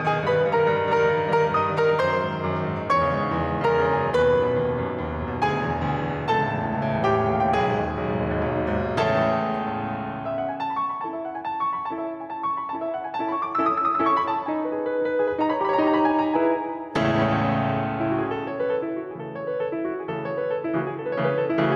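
Throughout the music, gain pumping is audible: quieter stretches swell up, then duck by around 5 dB under each loud hit, most likely because the input gain was too high and a fast limiter kept clamping it. The waveform looks flattened, with troughs rising between peaks.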